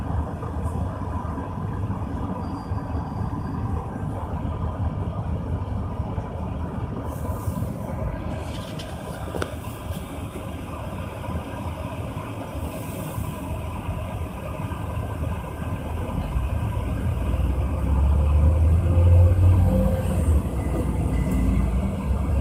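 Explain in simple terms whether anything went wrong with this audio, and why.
Nothing went wrong here: the signal carries no dropouts, glitches, distortion or other technical faults that a listener would notice.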